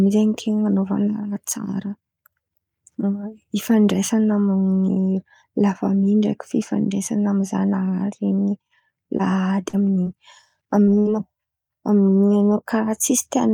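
Short concealed packet losses hit the speech at 9.17, 9.69, 10.03 and 10.83 s. Each gap of 20 to 40 ms was patched by extending the last sound, heard as brief smears or wobbles. At 10.99 to 11.07 s, a burst of packet loss leaves 60 ms missing. The fill continues the last sound and fades before the speech resumes.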